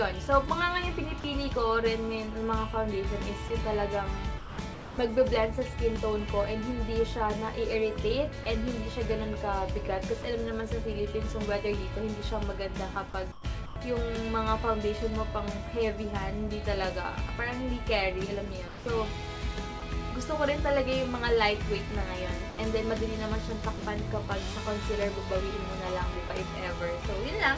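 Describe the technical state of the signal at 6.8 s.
At 6.8 s the signal is intact, with no dropout, glitch or distortion, and the band stops at about 8 kHz as expected of the G.722 coding on the WebRTC call path.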